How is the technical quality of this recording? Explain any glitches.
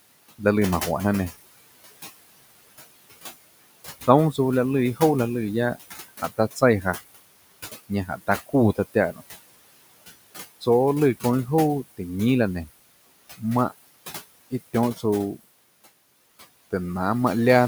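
The recording has two processing faults from a noise suppressor. Room noise sits about 15 dB below the speech.

Noise suppressor artifacts run through the whole clip. The suppressor estimates steady noise in each frequency band, frame by frame, and pulls it down by about 18 dB. So the background drops in the gaps and swells back under speech.

Speech cut by the noise suppressor happens from 8.07 to 8.54 s. Here the suppressor mistook quiet parts of the speech for noise. It turned them down with the background, by up to about 11 dB. In total, only about a tenth of a second is affected. Those sounds come across swallowed and faint.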